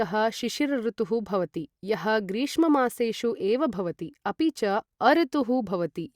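No technical faults are audible anywhere in the speech.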